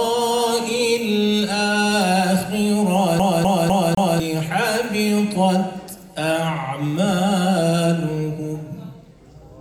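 A CD stuck on one turn runs from 3.19 to 4.20 s. A scratch keeps sending the laser back one track at the same point on each rotation, so a loop of about 251 ms plays four times in a row, with a brief mute at every jump. The result is the rapid, evenly spaced stutter of a skipping disc, lasting roughly a second before playback moves on.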